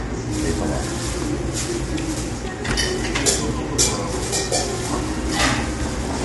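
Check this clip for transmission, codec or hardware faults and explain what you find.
One codec fault runs through the whole clip: low-delay AAC compression. Throughout, the sound is rough and grainy, with plainly audible damage and nothing above 11.6 kHz. This is likely AAC-ELD, whose short frames resolve fine spectral detail poorly; the coarseness fits a bitrate around 32 kbps.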